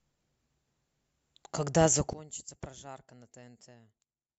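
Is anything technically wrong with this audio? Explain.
Yes. From 2.13 s to 4.38 s the speech drops about 20 dB to a faint remnant, likely one channel inverted cancelling in mono; the waveform shrinks and all frequencies fade on the spectrogram.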